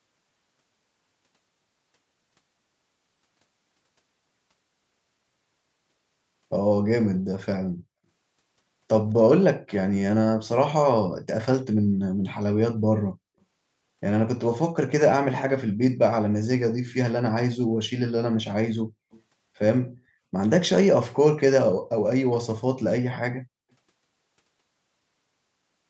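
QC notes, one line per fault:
19.11–19.21 s, echo leak: a brief, very faint copy of the speech surfaces 245 ms behind the original and lasts about a tenth of a second. This is likely loudspeaker pickup at the far end that its echo canceller did not fully remove and sent back.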